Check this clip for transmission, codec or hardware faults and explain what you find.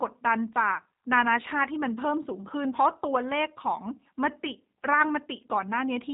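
A G.729 codec fault affects the whole clip. Throughout, the speech sounds rough and synthetic, with plainly audible codec damage and nothing above 3.8 kHz. The codec rebuilds each 10 ms frame from a filter model and sparse pulses rather than the waveform itself, which fits 8 kbit/s G.729A coding.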